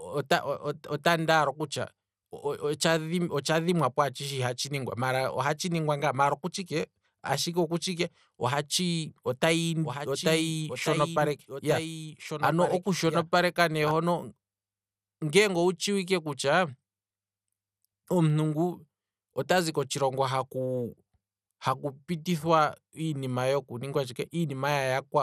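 Across the whole recording the speech sounds dull and gurgling, with a grainy, watery texture and nothing above 15 kHz. This is likely MP2 compression at a low rate, around 80 kbps, where starved upper sub-bands switch off and the remaining bands are coarsely quantised.

From 9.83 to 13.91 s a second, quieter copy of the speech runs about a second and a half behind the first, roughly 10 dB down, dry and full-band, starting and stopping abruptly. This is likely a doubled audio track, with the same signal mixed in twice out of step.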